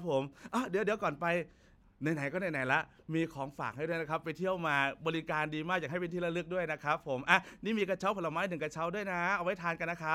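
Speech, with no technical fault to be heard anywhere in it. Nothing in the recording calls for a time stamp or a cause.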